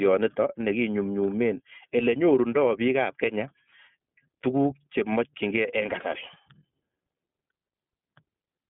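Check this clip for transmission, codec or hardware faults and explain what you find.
One codec fault runs through the whole speech clip: iLBC codec coding. Each frame's excitation is coded independently at a low rate, which fits the 13.33 kbps, 30 ms-frame mode. Nothing above 3.8 kHz survives, the band sits near 150 Hz to 3.6 kHz, and the speech sounds plainly rough and synthetic.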